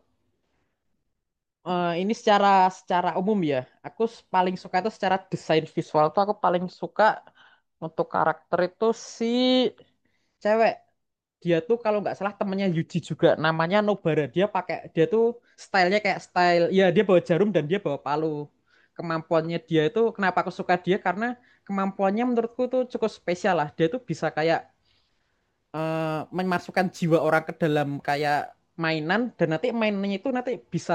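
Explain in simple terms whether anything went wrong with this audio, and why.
Crude rate conversion affects the speech from 25.77 to 28.58 s. For those few seconds the audio was converted to a slightly different speed setting the cheap way, by simply repeating the nearest existing samples instead of smoothly filtering them. The pattern fits a change from 44.1 kHz to 48 kHz. That shortcut leaves small, regular mistakes that create extra tones unrelated to the voice. You hear a faint gritty fizz riding on the louder and brighter sounds.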